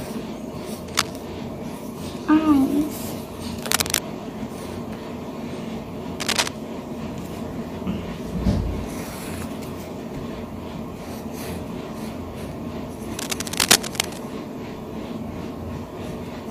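Cable scratch noise: bursts of scratchy rustle, about 5 dB louder than the audio, at 0.88–1.11, 3.62–4.01, 6.20–6.50 and 13.19–14.18 s, likely from a worn cable or connector being moved; dense and uneven rather than isolated clicks.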